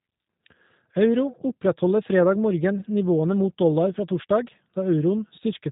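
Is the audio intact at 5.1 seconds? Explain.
No. At 5.1 seconds, as throughout the clip, the G.729 codec damage is plainly audible: speech rebuilt from a vocal tract filter, pitch predictor and sparse pulses sounds rough and synthetic, consistent with an 8 kbit/s codec. A spectrogram shows a hard ceiling near 3.8 kHz, with nothing above.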